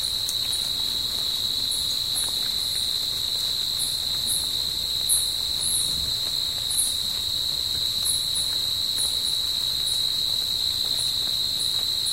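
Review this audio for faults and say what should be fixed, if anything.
Linear timecode running at 25 frames per second has leaked from a neighbouring track or cable into the audio path for the whole clip. Timecode bleed of this kind is a square wave flipping between two pitches, here around 1 kHz and 2 kHz. It sits roughly 30 dB below the wanted sound and is heard as a constant chirping warble running behind it from start to finish. To prevent it, route timecode on separate, well-shielded cabling away from audio lines and keep it off adjacent tracks.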